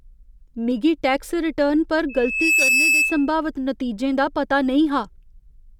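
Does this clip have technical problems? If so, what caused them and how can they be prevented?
Yes, loudspeaker feedback squeal from 2.09 to 3.33 s: a 2.6 kHz tone swells within about 0.4 s to roughly 5 dB over the speech, since the mic-speaker loop gain tops one there. To prevent it, keep the mic away from the speakers and notch out that frequency.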